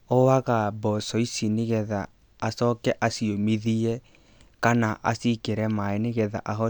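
No technical faults can be heard anywhere in the speech recording, and the signal stays steady and continuous throughout.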